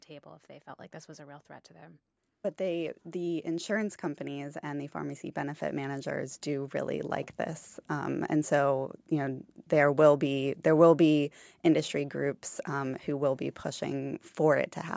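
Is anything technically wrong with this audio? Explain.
Yes. From 2.57 to 7.36 s there is automatic gain rising. The gain control judged the speech input too quiet and lifted its gain by about 10 dB, so speech and background swell together. Unlike a sudden level jump, the rise is slow and smooth.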